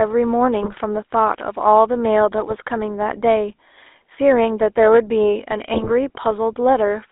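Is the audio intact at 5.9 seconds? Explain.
No, 5.9 seconds falls inside a burst of GSM bit errors running from about 5.74 to 5.91 s. Corrupted bits are reaching the speech decoder, so the filter, pitch and gain values it rebuilds from are wrong for a handful of frames in a row. The spectrum lurches and the level jumps, and the speech breaks into squawky, gargling pops. The density of the damage suggests an error rate somewhere near 2 percent on a weak link.

Underneath that, the GSM full-rate codec is coloring the whole clip, including this moment. The codec models the vocal tract and drives it with a sparse, regularly spaced pulse excitation, so the speech takes on that buzzy, gravelly roughness, and it's plainly audible here. The band is squeezed to roughly 300 Hz to 3.7 kHz, which fits a 13 kbps full-rate stream, so everything sounds narrow and boxy on top of the error burst.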